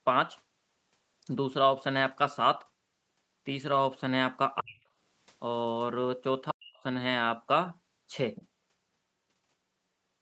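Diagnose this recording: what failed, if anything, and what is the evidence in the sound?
Call processing: the speech sinks by roughly 40 dB at 4.6–4.82 s and 6.5–6.77 s. That's likely speech suppressed in double talk, with the echo canceller ducking everything.

At 8.36–8.47 s there's a short scrap of the other side's voice leaking through, about 20 dB down. It's likely loudspeaker echo the canceller missed.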